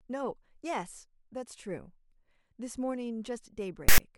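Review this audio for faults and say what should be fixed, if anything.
From 3.89 to 3.98 s the speech is cut by a hard-edged burst of loud rasping static, offset to one side: file tags played as audio. A text tag block was decoded as samples. Prevention: have the reader skip tag blocks by their declared size before decoding audio.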